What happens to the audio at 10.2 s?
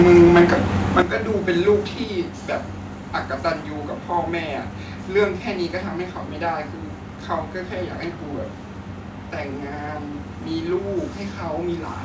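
Nothing goes wrong at 10.2 s: the speech carries on intact through the call path, with its G.722 coding leaving nothing above about 8 kHz, as it does throughout.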